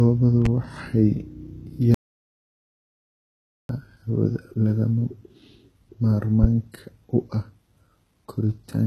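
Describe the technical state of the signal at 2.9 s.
At 2.9 s the signal is in an audio dropout to silence running from 1.94 s to 3.69 s, about 1.75 s of nothing at all. The speech cuts out abruptly and returns abruptly, and the gap holds no room tone or hiss. The waveform is a near-flat line, and the spectrogram is an empty vertical band with no noise floor. The likely cause is a lost input, such as a dropped link, disconnected device or stray mute, while the recorder kept writing silence.

HE-AAC compression affects the whole clip, though at 2.9 s it has nothing to act on and is heard in the speech on either side of the gap. The codec damage is plainly audible: s sounds and other sibilance come out gritty and metallic, because the treble is likely rebuilt by spectral band replication rather than coded directly. The spectrogram shows a hard ceiling near 12.4 kHz, and the upper bands look smeared and repetitive instead of carrying true harmonics. 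The degree of damage fits a very low bitrate around 16 kbps.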